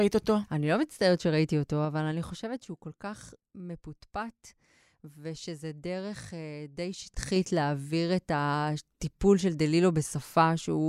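A speech recording with audible ticking zipper noise as the level drops by about 10 dB from 1.72 to 2.78 s, then a faster zip as it climbs back up by about 10 dB from 7.02 to 7.41 s. The gain moves in unsmoothed 3 dB steps, each one clicking.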